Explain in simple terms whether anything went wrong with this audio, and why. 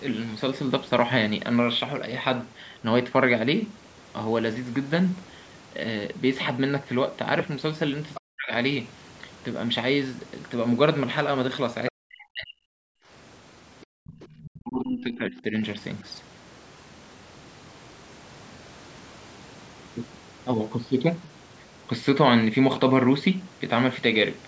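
Several things went wrong, all tied to the call's echo handling.

Other side's voice leaking through: at 8.14 to 8.21, 11.87 to 11.92, 13.81 to 15.42 and 21.23 to 21.32 s, a faint second voice sits under the main one. This is likely loudspeaker sound the echo canceller failed to remove. Unlike the dips below, it adds sound rather than taking any away.

Speech suppressed in double talk: at 8.19 to 8.53, 11.91 to 12.70 and 14.61 to 15.55 s, the main talker suddenly turns quiet or breaks up, each time while that other voice is present. This is likely the canceller turning everything down while both sides spoke at once.

Background gated by the echo canceller: between 12.98 and 14.05 s, the room sound itself drops away, briefly and sharply, for roughly a third of a second in total, then returns. Here the quiet room background vanishes, not the talker, because the canceller clamped the microphone while the loudspeaker played.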